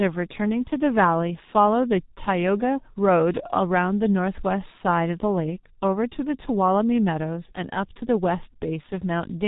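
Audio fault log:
Throughout: G.723.1 codec. The speech has been squeezed through a low-rate telephony coder that works in 30 ms frames, and the heavy damage fits a rate near 6.3 kbit/s. Nothing survives above about 3.8 kHz, so the speech sounds muffled and dull. The coder's model of the voice updates only once per frame, which smears quick transitions into a hoarse texture and leaves consonants blurred and indistinct.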